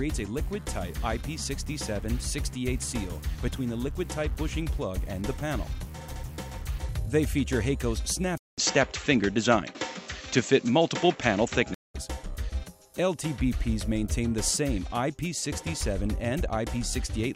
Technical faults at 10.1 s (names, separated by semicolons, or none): input switched to a poorer device